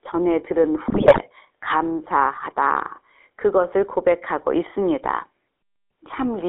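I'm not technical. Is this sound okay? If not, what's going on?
No. The speech went through the GSM full-rate codec, an old mobile phone coding that keeps only a narrow band, roughly 300 Hz to 3.5 kHz. That makes the voice thin, buzzy and gravelly throughout. From 0.88 to 1.19 s there are GSM bit errors: a weak phone link garbled the data, so the voice breaks up into squawks, pops and gargling.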